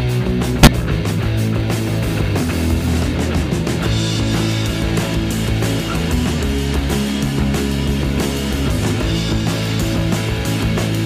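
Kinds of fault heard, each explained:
Corrupt frame decoded: a damaged compressed frame played anyway, giving a brief glitch near 0.63 s, about 46 ms, seen as a misplaced spectral smear and a waveform spike.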